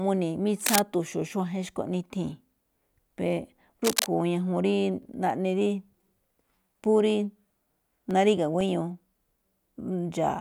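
Two short bursts of cable scratch noise sit over the speech, from 0.60 to 0.80 s and from 3.84 to 4.07 s, each lasting about a fifth of a second. They are dense, irregular crackle and rustle at roughly the same loudness as the voice. This is likely a worn cable, connector or control being moved, which makes its contact resistance fluctuate rapidly and inject uneven noise into the signal path.

From 7.10 to 9.11 s there are periodic USB or driver dropouts, spaced every 0.5 s, with about five in total. At each one a sliver of audio, around a millisecond, is replaced by silence. This points to something stalling the USB bus or audio driver on a fixed schedule. Each gap is audible as a small, regularly timed tick riding on the speech.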